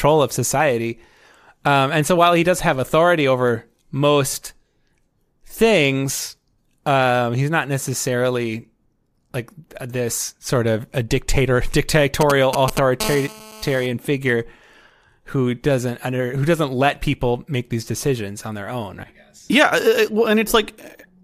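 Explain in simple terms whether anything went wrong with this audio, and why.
A few things went wrong, all in the middle of the clip.

At 11.35 s, just after "this sort of a", there's a tiny glitch from lost LE Audio frames. One 10 ms chunk of the wireless audio never arrived, so the decoder filled the gap by reusing the sound it had just played, with its details scrambled. Because the gap is so short, you hear a brief grainy blip rather than a dropout. The link itself sounds like it's likely Bluetooth LE Audio using the LC3 codec, with only light compression wear on the speech.

From 12.21 to 13.02 s come GSM signalling bursts: a galloping dit-dit-dit of short buzzes, fairly loud against the speech. That's an old 2G mobile phone nearby talking to its network, as it does right before a call or text arrives. The audio circuitry accidentally picks up those radio pulses and turns them into sound.

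Right after, from 13.02 to 13.86 s, the pattern settles into a steady GSM phone buzz, a harsh, raspy drone at 217 Hz, which is the rate that phone sends its radio bursts once a call is connected. It's quieter than the galloping buzzes but continuous, and it has nothing to do with the speech itself.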